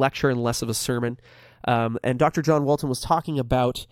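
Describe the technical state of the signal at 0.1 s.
At 0.1 s the speech already carries channels drifting apart, a fault spanning the whole clip. The two channels run on clocks differing by roughly 100 ppm, so their offset creeps toward about a third of a millisecond. In mono this gives slow flanging, seen on a spectrogram as comb notches gliding gradually across frequency.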